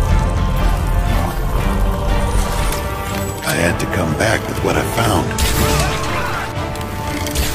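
From 1.19 s to 3.64 s the receiver is heard blending from digital radio to analogue FM and back, each crossfade lasting about 0.37 s. Hiss rises to roughly 30 dB below the signal, showing as a raised broadband noise floor on a spectrogram, while waveform level stays unchanged.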